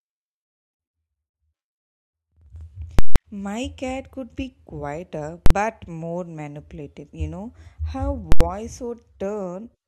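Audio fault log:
2.99–3.16 s, 5.46–5.50 s, 8.32–8.41 s, invalid numbers at full scale: infinite or invalid values were clamped to maximum amplitude and held for each block (171, 43, 85 ms, fitting 8192-, 2048- and 4096-sample blocks), so loud pops bracket the first and last silences and the shortest collapses into one bang.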